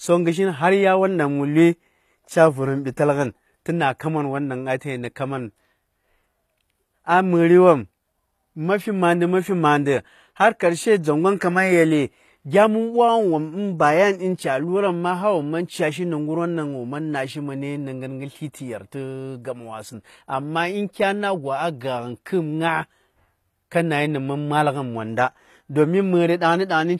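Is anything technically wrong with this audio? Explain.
Yes. Throughout the speech, the sound points to HE-AAC compression at a low rate, something like 24 kbps. The likely cause is replicated treble rebuilt from lower bands, so s sounds turn gritty and lispy, with nothing above 14.9 kHz.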